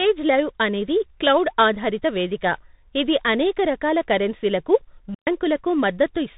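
From start to finish the speech carries tandem speech coding: it sounds like a chain of CVSD, G.711 mu-law and G.726 at 40 kbit/s, each coder re-encoding the last one's output. Nothing reaches above 3.8 kHz. The result is rougher and noisier than any single codec would produce.

At 5.14 to 5.27 s comes a digital wireless dropout. The receiver loses too much data and mutes for about 127 ms, leaving a clean hole of near silence. No noise burst comes before or after it, which sets it apart from an analogue radio fade.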